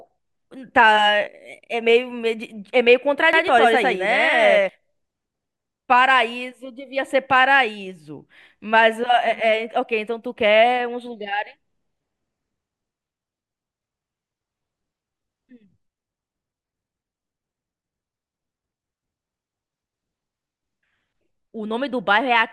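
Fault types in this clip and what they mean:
Doubled audio track: from 3.33 to 4.69 s the speech is joined by a second, equally loud copy trailing about a tenth of a second behind, likely from a slower capture path. The waveform shows every burst repeated, and the spectrogram shows full-band echoes that start and stop abruptly.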